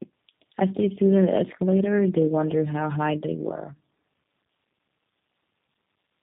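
Throughout, the speech sounds rough, muffled and warbly, with nothing above 3.6 kHz. This is tandem speech coding: the call was squeezed through G.729A at 8 kbit/s, passed as G.711 A-law, then coded by G.729A again, compounding the first coder's damage.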